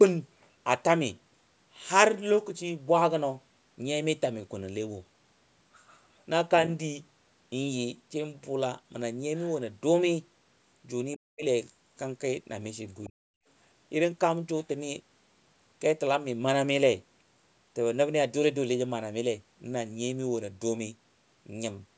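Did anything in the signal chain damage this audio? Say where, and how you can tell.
Yes. The speech plunges roughly 40 dB from 11.16 to 11.44 s and again from 13.07 to 13.27 s. That is speech suppressed in double talk in the call processing: the echo canceller likely mistook the near talker for loudspeaker echo and muted both.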